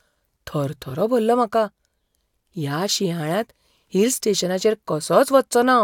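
No technical faults can be heard in the signal at any point in this recording of speech.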